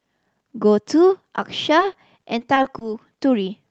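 From 1.79 s to 2.83 s the speech turns choppy, with small pieces dropping out. The cause is repeated packet loss: seven brief gaps, none longer than 20 ms, were each patched by extending the preceding sound, together covering about 13% of that stretch.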